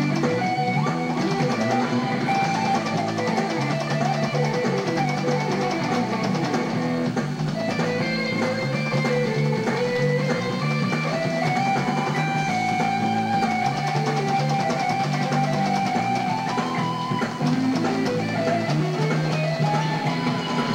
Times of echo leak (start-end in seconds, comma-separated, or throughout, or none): none